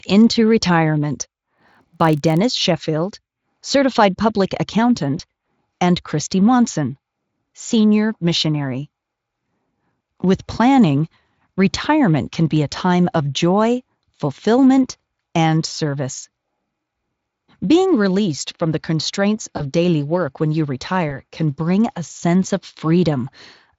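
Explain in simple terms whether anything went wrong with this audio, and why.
Between 1.56 and 2.38 s there is a block size mismatch (padded). One stage hands over short chunks of speech, and the gaps are filled with silence. That makes a low buzz of about 47 Hz, which fits a 1024-sample read size. The slowdown is too small to notice.

At 5.18, 19.57 and 21.09 s there is VoIP packet loss concealed by the speech codec. Each time, a piece of the speech went missing. The decoder then guessed by stretching what came before, so the voice briefly turns into a buzzy tone or a coloured noise that fades. It stays weak for a moment after the speech returns. The Speex codec carrying the call adds little or no audible damage of its own.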